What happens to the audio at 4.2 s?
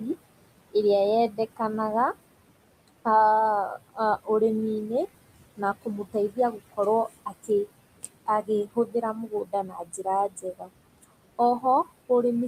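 At 4.2 s the noise suppressor mistakes part of the speech for steady background noise and turns it down along with the room sound. This speech cut by the noise suppressor spans 3.84 to 4.29 s, dropping the level by up to about 20 dB. The affected portions, about 150 ms in all, sound swallowed and faint.

The same suppressor works band by band, frame by frame, through the whole clip, pushing the room noise down by about 21 dB. Around 4.2 s the leftover noise sinks between the words and rises under them.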